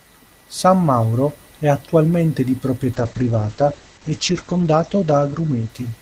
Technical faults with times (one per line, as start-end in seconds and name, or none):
2.94-6.01 call bitrate drop